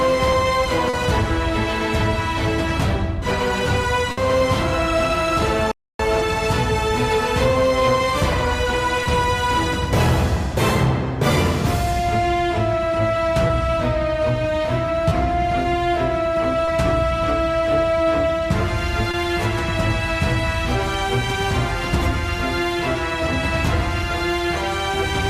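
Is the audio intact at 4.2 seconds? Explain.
No. A burst of packet loss from 4.11 to 4.19 s dropped about 60 ms. The receiver stretched and faded the last sound into the gap, and the audio then resumes near 4.2 s with that stretch missing.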